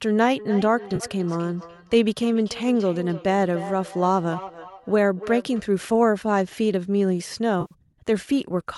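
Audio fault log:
0.38–5.66 s: feedback echo between two devices. Sound returns roughly every 300 ms at up to about −14 dB, thinner each pass; the spectrogram shows faint, evenly spaced copies trailing each burst.
0.96–1.03 s and 7.61–7.73 s: AAC frame loss with concealment. Gaps of 40 ms and 100 ms are filled from earlier spectra, heard as smeared, phasey patches; the spectrogram shows blurred, streaky slices without crisp onsets.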